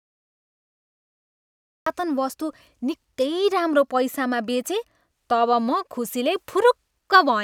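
From 0 to 1.86 s there is nothing but digital silence, then the speech bursts in mid-sound with no attack or fade, abruptly and already at full level. This is a cut-off start: the recording or stream began late, catching the talker partway through.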